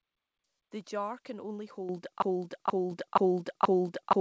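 At 1.89 s, right after "jar can only", the microphone volume steps up by about 8 dB: the call software decided the input was too quiet and raised the device gain in one go, so the voice and the background room sound jump louder together. It happens again at 2.91 s, also just after "jar can only", this time by about 4 dB. Through all of it the sound stops at 8 kHz, which fits a G.722 call codec.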